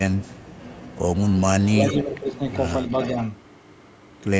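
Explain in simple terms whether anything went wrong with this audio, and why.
Two things went wrong. The most likely cause of the first is an echo leak. Someone on the call was using a loudspeaker, and their echo canceller didn't fully remove the sound their microphone picked up, so some of it was sent back. You hear a faint, delayed copy of the speech about a third of a second late, at 0.28 to 0.33 s, 1.87 to 1.99 s, 2.5 to 2.59 s and 2.88 to 3.16 s. It is barely there at first and clearer at 1.87 s and 2.88 s.

The second is speech suppressed in double talk. Both sides talked at once, and the echo canceller could not tell the local talker from the loudspeaker echo, so it likely turned everything down together. From 2.03 to 2.4 s the speech dips and sounds noticeably quieter for a little under half a second, then comes back.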